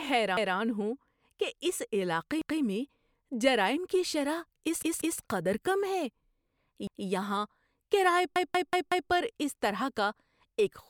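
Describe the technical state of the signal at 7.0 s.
At 7.0 s the speech falls inside a repeated buffer running from 6.87 to 7.06 s. New audio arrived late, so the device replayed the previous 186 ms block once, which fits an 8192-sample buffer. It is heard as a stutter with a hard join. On a waveform or spectrogram the same pattern appears twice side by side, with a sharp discontinuity at the seam.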